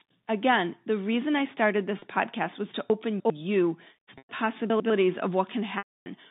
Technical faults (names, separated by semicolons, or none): packet loss with pitch repetition; chunks out of order